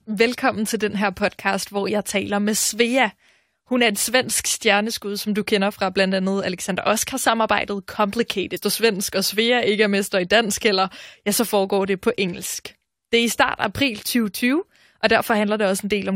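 At 8.56 to 8.58 s the speech jumps abruptly forward, with a brief blip at the join, and resumes on "svensk og". The delivery does not run continuously across that point. A stretch of the programme is missing rather than paused. The likely cause is a stream segment skipped: one chunk of the segmented stream failed to load, so the player skipped it and carried on with the next segment.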